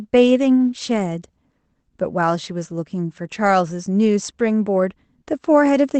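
The speech comes through a WebRTC call path with no technical faults, its Opus coding holding the audio to roughly an 8 kHz bandwidth as that kind of call link normally does.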